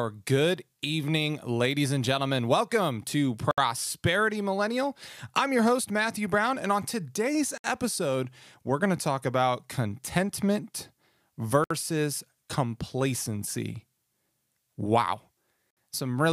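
At 3.51, 7.58, 11.64 and 15.71 s the speech stops dead for about 65 ms (67 ms at the first, 64 ms after) and resumes exactly where it left off, as between "and on today's" and "episode we're going to". These are gaps at a join of encoded pieces: each 4-second chunk was encoded separately, and its start-up silence and end padding were left in. A dropout would skip sound or fall at random intervals, but here nothing is lost and the gaps keep a regular spacing of about 4 seconds.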